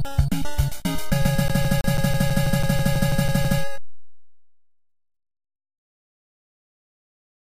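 From 1.48 to 3.61 s the CD is stuck on one turn: a 0.16 s slice repeats 13 times with brief mutes, an even mechanical stutter rather than buffer dropouts.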